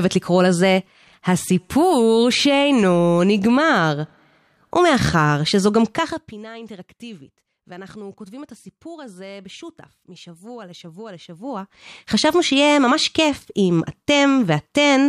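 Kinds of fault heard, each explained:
Zipper noise: the level falls, then later rises, by roughly 20 dB in unsmoothed steps, around a hundred a second, so it buzzes and ticks rather than fading cleanly.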